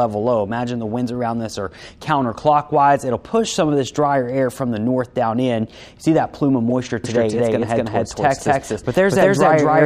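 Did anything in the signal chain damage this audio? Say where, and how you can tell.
Yes. At 6.70 s there is a brief, sharp glitch, peaking fairly loud, that doesn't belong to the surrounding sound. This is a corrupt frame decoded, introduced at the codec stage. Bit errors in the compressed stream, spread over a couple of frames, led the decoder to read wrong gains and codes. For that instant it placed energy at the wrong frequencies. That is why the glitch is so short and spectrally out of place.

From 7.04 s to the end, everything is heard twice. A second full-band copy trails the first by around 300 ms and is about as loud. It has no decay or room colour, and it starts abruptly rather than building up. This is a doubled audio track, likely from the signal being captured a second time through a slower path, or from an edit that left two out-of-step copies. Acoustic echo would be quieter and coloured by a room, and this copy is neither.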